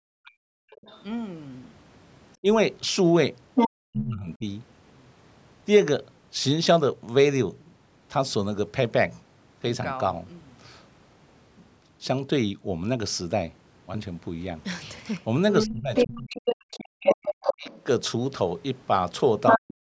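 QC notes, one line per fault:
0.04 to 0.85 s, 3.85 to 4.45 s, 15.66 to 17.71 s, 19.57 s to the end: speech suppressed in double talk. The voice dips by up to about 40 dB, likely because the echo canceller ducks both talkers.
0.86 to 1.03 s, 3.55 to 3.70 s, 15.61 to 17.80 s, 19.46 to 19.59 s: other side's voice leaking through. A second voice surfaces, from faint to about 5 dB louder than the speech. Loudspeaker echo likely escaped cancellation.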